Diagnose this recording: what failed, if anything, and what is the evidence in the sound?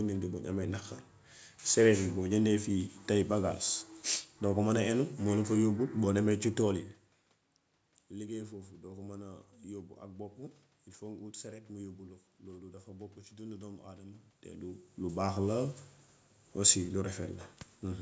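Nothing stood out on listening to this speech recording.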